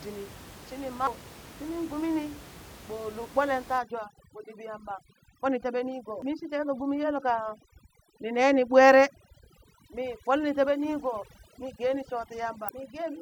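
Three brief glitches cut through this speech recording, at 1.07 s, 6.22 s and 12.69 s, each lasting only a few milliseconds. They are the sound of damaged data in a compressed stream. Bytes in the file were lost or corrupted at those spots, so the decoder misread the affected frames, lost its place and had to resynchronise on the next valid frame header, producing a short chirp, click or hole instead of clean audio. From 3.78 s to the end, the background room noise, which sits about 20 dB below the speech, collapses into near silence sprinkled with twinkling specks. That is overdone noise removal. A noise reduction stage set too aggressively is pulling individual frequency bands down or out whenever they come close to its noise estimate, and the quieter components of the speech are being stripped away together with the background noise.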